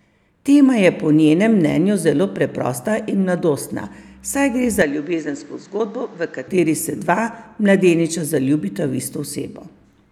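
Right after "saj gre", from 4.82 to 6.48 s, the speech goes dull and a bit quieter, with nothing above 8 kHz, likely an input switched to a poorer device.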